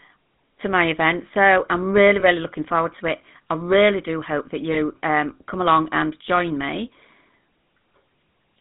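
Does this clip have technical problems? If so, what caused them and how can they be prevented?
Yes. Throughout the speech there is the buzzy, gravelly roughness of the GSM full-rate codec, which fits a 13 kbps full-rate GSM path. The codec models the vocal tract and drives it with a sparse, regular pulse excitation, so fine voice detail is replaced by a coarse, rasping texture. The band is limited to about 150 Hz to 3.7 kHz. A spectrogram shows a hard ceiling near 3.7 kHz with nothing above, and smeared, grainy harmonics below. Prevention: carry the call over a wideband codec such as AMR-WB or Opus instead of legacy GSM.

Lost GSM frames occur at 2.20–2.24 s, after "I'm really" and before "looking forward to it", and at 4.72–4.77 s, after "really do hope that" and before "um come along and". Each is a single 20 ms gap concealed by repeating the last good frame's settings, heard as a brief metallic ring. 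The spectrogram shows a short frozen, smeared patch. Prevention: improve radio link quality or add stronger channel coding so frames arrive intact.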